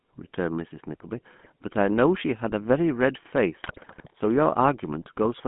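GSM full-rate codec coding runs through the whole speech clip: the sound sits in a narrow line band of about 150 Hz to 3.4 kHz, and its buzzy, gravelly texture fits the 13 kbps coder, which rebuilds the voice from a vocal-tract filter driven by sparse, regularly spaced excitation pulses. GSM bit errors break in at 1.38–1.46 s and again, longer, at 3.62–4.11 s. Corrupted filter, pitch and gain values reach the decoder, so those stretches turn into squawks, pops and gargling, the second burst spanning far more frames.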